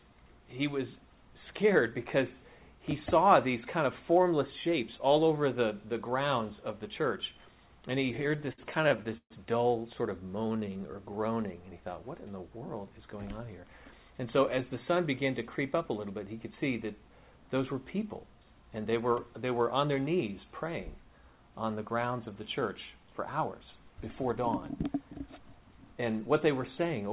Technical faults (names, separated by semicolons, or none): repeated stalls (stutter); jitter buffer slow-down; jitter buffer speed-up